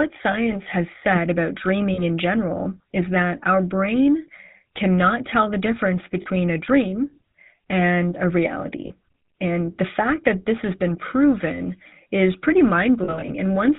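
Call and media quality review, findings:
Buzzy, gravelly roughness on the speech for the whole clip, nothing above 4 kHz. GSM full-rate codec, plainly audible damage, consistent with a 13 kbps full-rate leg. The codec models the vocal tract and drives it with a regular pulse train that keeps only every third excitation sample, hence the grit. Probably a mobile hop somewhere in the path.

Short metallic rings at 0.32, 1.94, 6.22 and 8.86 s. These are lost GSM frames, about 20 ms at 0.32 and about 40 ms at the other three. The decoder repeats the last good frame's settings at a falling level, so the speech smears into a brief ring. Worst patch runs 13.04 to 13.3 s, where about 120 ms is lost in short runs of about 40 ms at most. That points to bursty radio-side loss.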